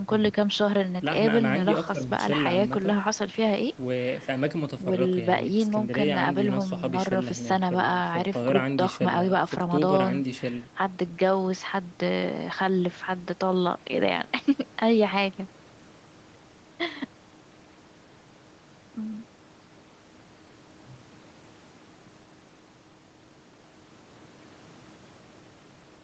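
Nothing goes wrong anywhere in this speech, which just carries the ordinary call-processing character, with the lowest bass trimmed and nothing above about 8 kHz, as you'd expect from an Opus call link.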